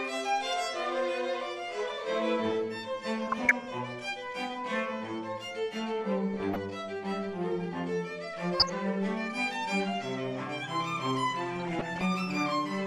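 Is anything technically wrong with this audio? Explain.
Yes, there is DAB burbling at 3.25–3.53 s, 6.34–6.56 s, 8.53–8.70 s and 11.56–12.01 s. Bit errors slipping past error correction corrupt sub-band samples, giving short blips of noise in single sub-bands rather than the silent gaps of dropouts.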